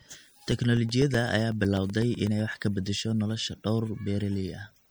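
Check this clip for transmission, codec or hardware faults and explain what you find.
Two faults are present: a compression artefact across the whole recording and a run of regular dropouts in the first half.

Throughout the speech, the sound is watery and swirly, with chirpy, metallic sibilants and softened consonant attacks. This is likely MP3 compression, at a level that fits a low bitrate around 64 kbps. Starved of bits, the encoder cuts the treble at a fixed frequency and zeroes quieter frequency lines, which flicker on and off from frame to frame. On a spectrogram this shows as a hard horizontal ceiling on the high frequencies and patchy, blotchy holes in the weaker detail below it.

From 0.14 s to 2.52 s, just before "ka bedesho", there are periodic USB or driver dropouts. About twenty gaps, each roughly 2 ms long, fall every 0.125 s, or eight per second. A blocked bus or driver fails to deliver audio on that fixed cycle, and each missing chunk is replaced with silence. 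The result is a steady ticking over the speech. A waveform shows brief flat notches at even spacing, and a spectrogram shows thin vertical broadband lines at each notch.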